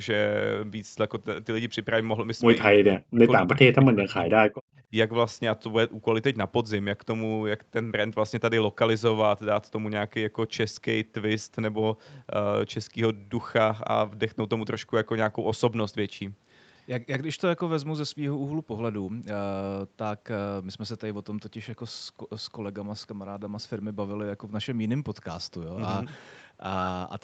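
From 2.7 to 3.21 s and again from 3.42 to 4.3 s the speech sinks and breaks up in pieces, dropping by something like 35 dB in the first stretch and about 25 dB in the second. That pattern is most likely speech suppressed in double talk: with both ends talking at once, the echo canceller couldn't tell this talker apart from the loudspeaker echo, so it pulled everything down together.

Right after, from 4.58 to 4.88 s, the room sound itself dips by about 40 dB for roughly a third of a second and then comes back. That's background gated by the echo canceller. While the far end was coming out of the loudspeaker, the canceller clamped the microphone hard, taking the ambience with it, and released once it decided the echo had passed. All of this sits inside the Opus call path, where nothing reaches above 8 kHz.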